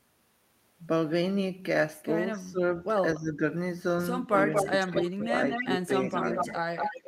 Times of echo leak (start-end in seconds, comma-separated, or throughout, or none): 4.32-7.07